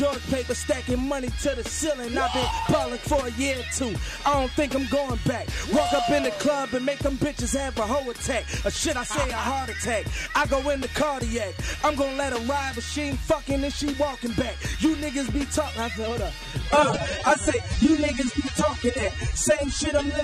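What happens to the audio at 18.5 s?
Coding artefacts become more audible, a sudden drop with no gap that runs from 16.68 s to the end. This is an adaptive stream at a lower bitrate: a slowed connection made the player switch versions, which sounds like a fall from roughly 96 to 24 kbit/s.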